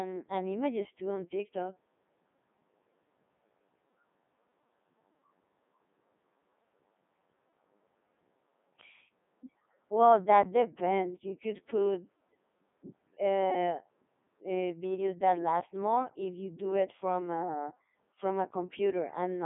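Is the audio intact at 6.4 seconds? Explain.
No. At 6.4 s, as throughout the clip, the speech carries heavy Codec 2 vocoder damage. Only pitch, voicing, energy and a spectral envelope survive, so the decoder rebuilds the voice from sine waves and it sounds robotic and buzzy. That buzzy resynthesis, rather than mere dullness, sets it apart from plain telephone band-limiting, although the band does run from 150 Hz to 3.6 kHz with nothing above 3.7 kHz. The sound fits a 3.2 kbit/s mode.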